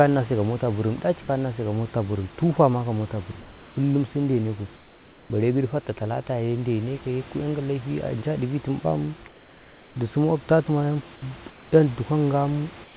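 At 3.4–3.76, 4.76–5.3, 9.28–9.96, 11.5–11.72 and 12.84 s to the end, the real room background drops out for a flat, featureless hiss about 2 to 5 dB quieter: comfort noise in place of the background, likely from discontinuous transmission.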